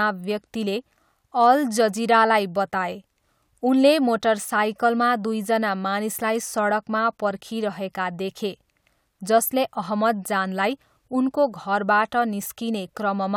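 Listening closely to the speech, nothing stood out as a technical fault at any point.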